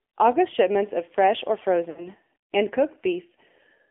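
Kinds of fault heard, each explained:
AMR narrowband mobile codec: the whole clip passes through a mobile speech coder at a rate that fits 7.4 kbps. The vocal tract model makes the speech buzzy and synthetic. On a spectrogram, energy sits between 250 Hz and 3.5 kHz, with nothing above 4 kHz.
Lost AMR speech frames: after "shipments of fresh or", about 60 ms of speech, roughly three frames, goes missing from 1.90 to 2.08 s. The decoder repeats the last good sound at falling gain, so the waveform sags into a short, smeared, fading stretch.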